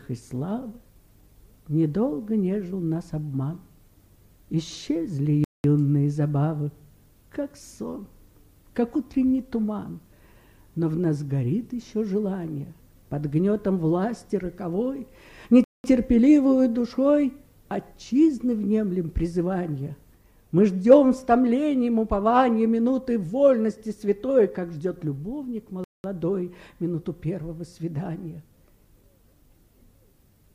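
At 5.44, 15.64 and 25.84 s the sound drops out for 200 ms, a gap between chunks: blocks every 10 s are joined with silence inserted rather than spliced seamlessly. Each hole has hard edges, showing as a flat waveform and a clean vertical blank stripe on a spectrogram.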